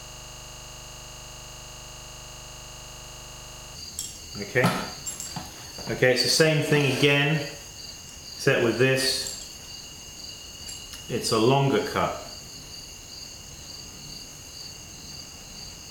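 The audio opens already caught in a system hang loop. From the first instant to 3.75 s, one 40 ms slice repeats exactly, over ninety times. It comes back 25 times a second, so it sounds like a rapid, rattling buzz rather than moving sound. That points to a 40 ms ring buffer. The computer or driver froze, and the sound hardware kept replaying the same stale buffer until the system recovered.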